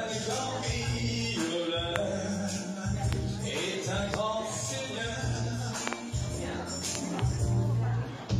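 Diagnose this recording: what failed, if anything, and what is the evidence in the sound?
Loud pops: single pops at 1.96, 3.13 and 4.14 s, and pairs at 5.88–5.95 s and 6.95–7.21 s. Each stands roughly 20 dB above the continuing sound. These are likely voltage steps in the analogue wiring. A waveform shows tall isolated spikes, and a spectrogram shows thin full-band vertical lines.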